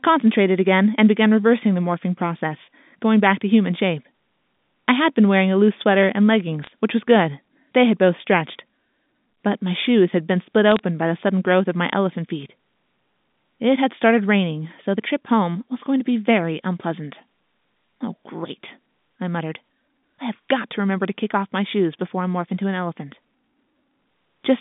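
At 6.64 to 6.70 s and again at 10.72 to 10.79 s, short bursts of sharp ticks break through the speech: bit errors on a digital phone line. Roughly one and a half bits in a thousand are flipped in the first burst and one in a thousand in the second, and each flip corrupts a single 8-bit logarithmic sample. Hits on the sign or upper bits throw that sample far off, giving a brief click-like crackle laid over the narrowband telephone audio.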